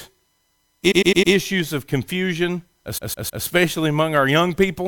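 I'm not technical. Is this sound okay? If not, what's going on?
No, it has a stutter from repeated frames, where a tiny chunk of the recording got stored or sent more than once, so it plays again. From 0.90 to 1.32 s, just before "of confusion", a 0.1-second slice repeats four extra times. From 2.97 to 3.44 s, just after "of confusion", a roughly 0.16-second slice repeats three extra times. You hear it as a skipping-record stammer, and each spot adds almost half a second.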